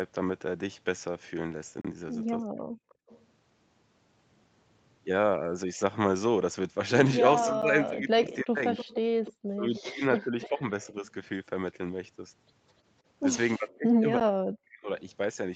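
Block of digital silence, at 1.81 to 1.85 s, 7.62 s and 14.20 s: the output buffer was likely not filled in time, so the sound drops straight to silence and back without any fade. The first hole lasts 32 ms and is heard as a short gap. The two later ones last about 11 ms each, which fits a 512-sample buffer, and come across as ticks.

Speech suppressed in double talk, at 2.56 to 2.73 s, 7.48 to 11.05 s and 13.58 to 14.88 s: the voice sinks, thins and breaks into pieces. The likely cause is an echo canceller that could not tell its own talker apart from the loudspeaker echo while both sides were talking, so it turned everything down. The level falls by about 40 dB in the first and last passages and by about 20 dB in the long middle one.

Echo leak, at 2.89 to 3.25 s, 7.40 to 11.10 s and 13.69 to 13.78 s: a copy of the voice comes back 297 ms late. It is likely that the far side's loudspeaker was picked up by its microphone and the canceller did not remove all of it. 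The copy sits about 30 dB below the speech in the short bursts, but reaches about 15 dB below during the long middle stretch.

Background gated by the echo canceller, at 3.01 to 3.07 s: with the loudspeaker active, the canceller clamped the microphone hard. The room tone drops by up to about 31 dB for roughly 70 ms and then returns once the canceller releases. It is heard as a brief hole in the background noise.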